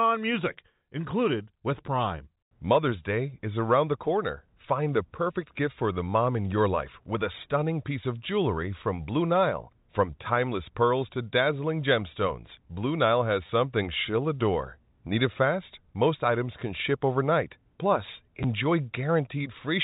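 At 13.47 to 13.49 s, just before "something she'll adore", then at 16.6 s before "can ship overnight" and at 18.43 s, packet loss with last packet repeated briefly disturbs the telephone-band sound. Each is a single 10 or 20 ms gap, which points to 10 ms packets, filled by replaying the previous chunk. That replay produces a short robotic stutter for the two-packet run and a small blip for each single repeat, rather than the silent hole of a plain dropout.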